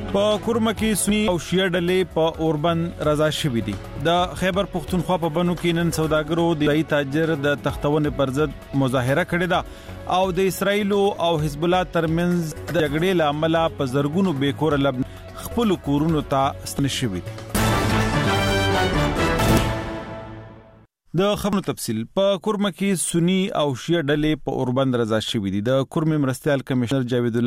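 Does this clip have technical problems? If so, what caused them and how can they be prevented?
Yes. Compressed frames are skipped at 1.09–1.28, 6.30–6.67, 12.52–12.80, 15.03, 16.33–16.79, 19.39–19.58, 21.43–21.53 and 26.82–26.91 s. Each time, lost or rejected frames make the audio jump ahead by a tenth to half a second. Checking file integrity and using error-resilient transport prevents this.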